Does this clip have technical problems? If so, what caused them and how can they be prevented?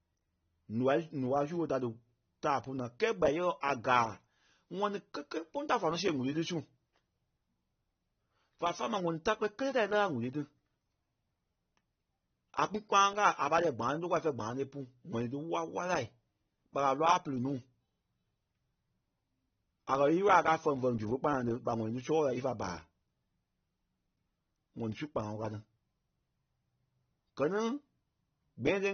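Yes. The whole clip sounds dull and smeared, with nothing above about 6.3 kHz and plainly audible codec damage. Sibilants lose their edge and sustained sounds pick up a warbling texture. That's most likely AAC compression at a low rate, which fits AAC-LC at something like 24 kbps: the encoder drops the top band and coarsely quantises the rest to save bits. Encoding speech at 64 kbps or more, or keeping a lossless master, would prevent it.

There's also a short pre-echo from 3.61 s to 3.63 s, a hiss spreading about 21 ms ahead of a sharp attack. The codec spreads its quantisation noise across the whole transform block, so noise sized for the loud onset leaks into the quiet moment before it and softens the attack. A higher bitrate, or an encoder that switches to short blocks on transients, would prevent it.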